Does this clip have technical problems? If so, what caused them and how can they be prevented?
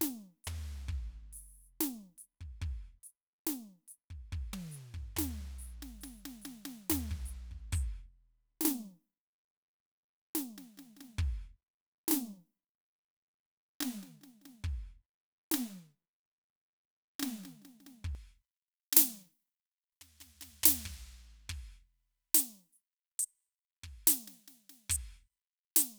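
Yes. From 18.15 s to the end, the music suffers from pre-emphasis left on. The treble jumps about 11 dB at 10 kHz relative to 1 kHz, with a tilt that fits a J.17 curve, because the boost was never undone. Always apply matching de-emphasis on playback.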